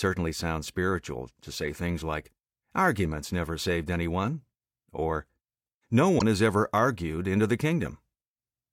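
At 6.18 to 6.22 s the audio skips forward and a brief glitch of about 40 ms sits at the join. This is most likely a broken MP3 bit reservoir: after frames went missing, the next frame reached back for borrowed data and decoded bytes belonging to another frame. The 26.1 ms frame spacing fits 1152-sample frames at 44.1 kHz. A spectrogram would show a short disturbance breaking the surrounding pattern, and the waveform would show an abrupt discontinuity.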